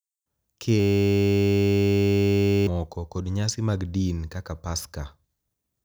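A speech recording, interrupted from 0.8 s to 2.67 s by a steady, flat buzz at 100 Hz. This is a system hang loop: the computer stalled while the sound hardware kept replaying one 10 ms stretch of its buffer, losing about two seconds of the recording.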